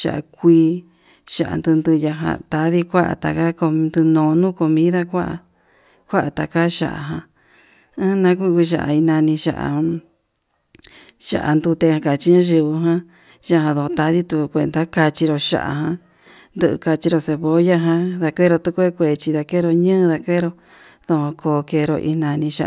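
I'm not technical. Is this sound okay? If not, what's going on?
Yes, this recording sounds fine, with no faults to point out. The speech comes across steadily the whole way, without dropouts, glitches or interruptions.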